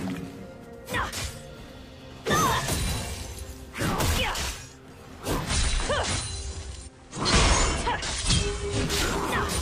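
At 5.37 s, over about 170 ms, a faint hiss rises, roughly 35 dB below the signal, with no change in level. It lasts until 8.99 s, when the hiss fades. This is digital radio blending to analogue: the hybrid receiver lost its digital stream and cross-faded to the same station's FM broadcast, then blended back once the digital signal recovered.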